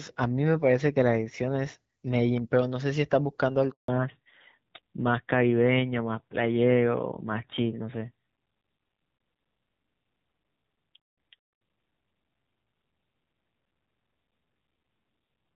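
At 3.70 s the speech cuts out abruptly, fading within a few tens of milliseconds into 180 ms of silence until 3.88 s. This is a handover gap: the call switched networks, no speech frames arrived during the changeover, and whatever was said then is gone.

From 3.88 s to the end, the voice sounds duller and rougher, losing the crisp upper detail heard earlier when the clear, lightly coded HD Voice sound fit AMR-WB at 12.65 kbit/s. This is a fallback to narrowband: the call dropped to an older codec, which fits AMR-NB at about 7.4 kbit/s, and nothing above 4 kHz survives.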